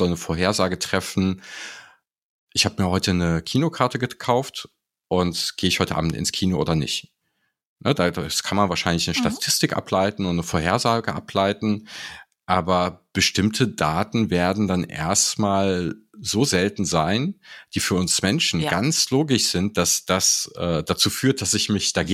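Nothing stood out as a technical fault on listening to this speech recording.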